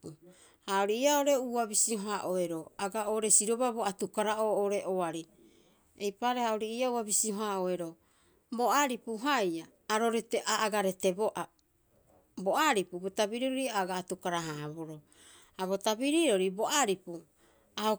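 Nothing's wrong here: it's a speech recording, and there's nothing to point to anywhere in it.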